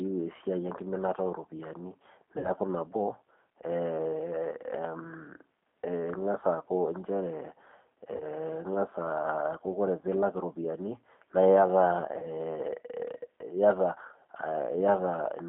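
Throughout, the speech carries the slightly rough, synthetic texture of the G.729 codec, consistent with an 8 kbit/s stream. A spectrogram shows energy confined to a line band of about 200 Hz to 3.5 kHz, with smeared, pulse-like fine structure in the harmonics.

From 2.38 to 2.50 s, at 8.16 to 8.25 s, and at 12.19 to 12.26 s, VoIP packet loss concealed by the speech codec stretches the sound into a fading extension. The first gap is about 60 ms, which fits three lost 20 ms packets, and the other two are about 40 ms each. On a waveform these appear as steadily decaying stretches, and a spectrogram shows smeared harmonics that remain weak or distorted just after each gap.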